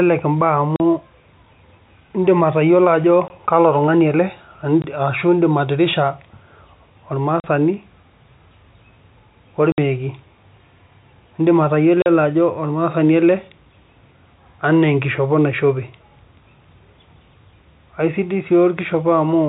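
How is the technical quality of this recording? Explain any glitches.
The speech is interrupted by six short gaps of packet loss filled with silence, heard over a telephone-band sound that stops at 4 kHz.

The gaps fall at 0.76 s (40 ms), 3.28 s (20 ms), 4.82 s (20 ms), 7.4 s (40 ms), 9.72 s (60 ms) and 12.02 s (40 ms). Each is a whole multiple of 20 ms, which fits 20 ms packets going missing singly or in runs. The receiver inserted plain digital silence, so each hole starts and ends with a hard edge. Packet loss concealment would instead bridge the gap with a smeared or repeated fragment of the surrounding speech.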